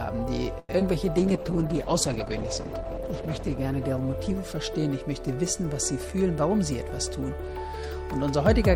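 At 0.59 s there's a short stall from a late packet: the jitter buffer ran dry, so the last sound is held about 96 ms until it arrives, with nothing lost. Right after, at 0.79 to 0.83 s, short concealed packet loss leaves a brief smear where around 40 ms never arrived and a bit of it was patched over. From 1.18 to 5.35 s the call bitrate drops from 64 to 11 kbps, bottoming out for about 2.3 s, so the audio goes rough and muffled as the highs get cut. Then from 6.51 to 7.58 s a jitter buffer speed-up trims roughly a tenth of a second, running things at 108% speed with the pitch unchanged, so it feels a little hurried.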